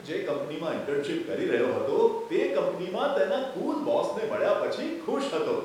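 Speech, with nothing technically wrong to report. No fault can be heard at any point in the recording.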